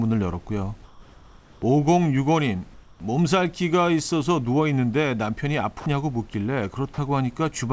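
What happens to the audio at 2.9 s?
Comfort noise in place of the background runs from 2.74 to 3.00 s. For 260 ms the room's real background gives way to a steady, featureless hiss about 5 dB quieter. The likely cause is discontinuous transmission, with the receiver synthesising noise to fill the pause.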